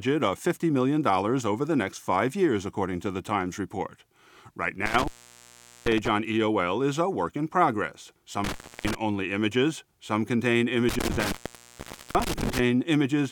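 The speech drops out abruptly three times, each gap edged with crackle and filled by faint hiss: from 4.86 to 6.08 s (open for 787 ms), from 8.44 to 8.95 s (306 ms), and from 10.89 to 12.59 s (821 ms). This is intermittent contact. A loose cable or plug briefly breaks the signal path, and the scraping of the contact as it opens and recloses produces the crackle around each silence.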